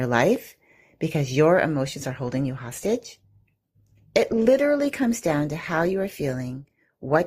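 Speech; from 1.94 s, after "because your", the adaptive stream drops to a lower bitrate with no gap. The quality changes abruptly, fitting Opus falling from 64 to 24 kbit/s.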